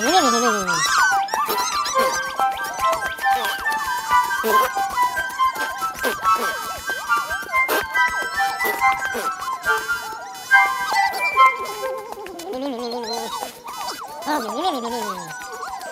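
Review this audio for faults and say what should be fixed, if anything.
There's computer activity noise running the whole way through: a buzzy, chirping whine pulsing at around 500 Hz, sitting roughly 20 dB under the sound. It's processor or graphics load shaking the shared ground into the audio path. Fix it with an isolated USB interface or ground-loop isolator.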